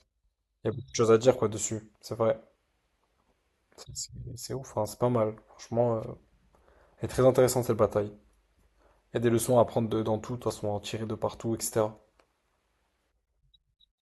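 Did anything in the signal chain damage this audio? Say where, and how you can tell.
No, nothing in the signal chain damaged this speech recording. No stage from capture to playback leaves any audible trace on the sound.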